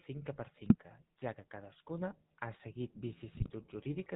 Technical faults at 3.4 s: GSM full-rate codec; GSM bit errors

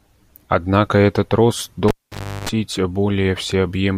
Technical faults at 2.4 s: cable pulled and plugged in

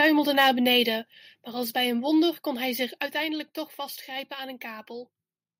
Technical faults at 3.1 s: microphone volume stepped down

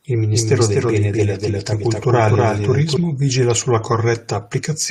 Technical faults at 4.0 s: lost packet rebuilt from error correction

